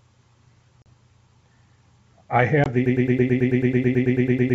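Packet loss on an ADPCM call cuts hard-edged holes into this speech at 0.82 s (about 40 ms, roughly two packets) and 2.64 s (about 20 ms, roughly one packet). After each gap, the decoder's predictor and step size no longer match the sender's, so the speech returns with brief distortion before settling. A broken-record loop starts at 2.86 s and runs to the end: a 109 ms fragment repeats back to back 15 times, replacing whatever should have followed. The likely cause is a stalled player or stream resending its last buffer. Beneath these faults, the wideband G.722 coding at 64 kbit/s leaves little or no audible trace.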